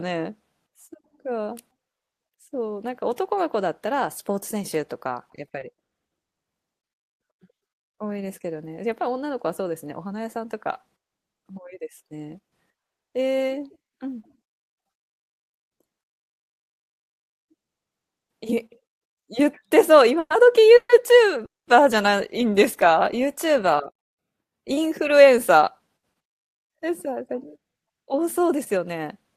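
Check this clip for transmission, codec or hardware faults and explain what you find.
The speech shows four kinds of network fault, all tied to the receiver's jitter buffer.

Repeated stalls (stutter) run from 5.35 to 6.33 s. Packets arrived late, so the buffer kept emptying. Six short gaps, the longest 60 ms, were filled by continuing the last sound, making the speech drag and stutter.

Jitter buffer slow-down occurs at 7.54 to 8.14 s and 22.50 to 23.26 s. Repeated pitch periods added 62 ms and 44 ms, so the speech runs at 90% and 95% speed, drawn out at unchanged pitch.

Jitter buffer speed-up occurs at 10.12 to 11.27 s and from 25.20 s to the end. Trimmed pitch periods, roughly 70 ms and 200 ms, make the speech run about 5% fast and sound hurried.

Call audio freezes appear at 20.19, 20.76 and 21.45 s, lasting 110, 130 and 220 ms. The last sound is held, then fades to silence before the speech resumes. 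This is likely from packets held up in transit.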